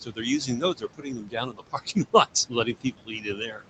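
Noise suppressor artifacts run through the whole clip. The suppressor pulls the room noise down by about 18 dB frame by frame, so the residual background sinks in gaps and rises under the speech, in a band that already stops at 8 kHz.

Speech cut by the noise suppressor occurs from 0.04 to 0.25 s, from 0.46 to 2.27 s, and from 2.48 s to the end. Parts of the speech, about 200 ms in the first span and roughly a second in the second, are misread as noise and dropped by up to about 18 dB, so soft consonants and word endings sound swallowed.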